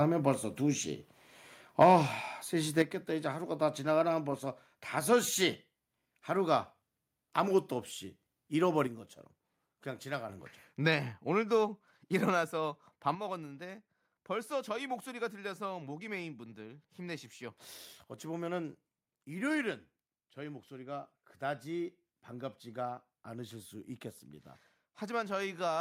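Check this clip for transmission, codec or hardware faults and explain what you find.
Four kinds of fault are audible, all concentrated in the first three seconds or in stretches of lost stereo content later on.

Microphone overload, 1.80 to 1.96 s: the loudest peaks grate and crackle for a moment. The likely cause is input gain set roughly 6 dB too high, driving the converter into its ceiling so that around one sample in twenty is flattened. On the waveform the peaks appear as squared-off plateaus. The spectrogram shows a smear of broadband energy above the harmonics during those instants.

Microphone volume stepped down, at 1.83 s (about 4 dB) and 2.82 s (about 7 dB): the whole sound, background included, drops abruptly twice, the first drop arriving in the middle of the distorted peak. This is likely automatic gain control in the call software reacting to the clipping by cutting the device's input level in discrete steps. 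The waveform envelope shows two clean staircase drops. On the spectrogram every band darkens at once.

One channel drops out, from 8.87 to 10.29 s and again from 13.15 s to the end: the level falls suddenly by about 6 dB and stays there for each stretch. The likely cause is one side of a stereo feed going missing before the mono sum, which halves the shared signal. The waveform shrinks to half amplitude at sharp edges, and the spectrogram dims uniformly with no change in spectral shape.

Microphone volume stepped up, at 17.55 s: the call software nudged the device input level up by about 1 dB, so sound and background rise together by a small but sudden amount, partly offsetting the channel loss. On the waveform it shows as a slight step in the envelope, and on the spectrogram as a faint, simultaneous brightening across all frequencies.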